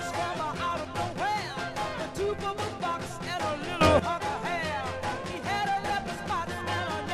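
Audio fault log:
3.81 to 3.99 s, sudden gain jump: a digital gain change, likely applied without a ramp, abruptly lifts the sound and its background noise together by about 12 dB.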